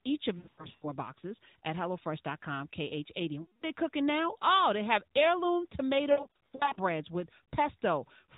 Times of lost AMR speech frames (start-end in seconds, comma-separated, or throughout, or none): 0.38-0.86, 3.42-3.66, 6.12-6.79